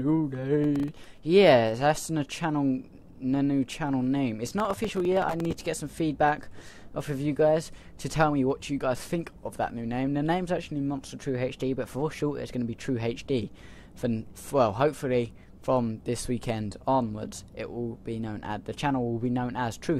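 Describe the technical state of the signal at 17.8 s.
At 17.8 s the signal is intact, with no dropout, distortion or other fault to be heard there.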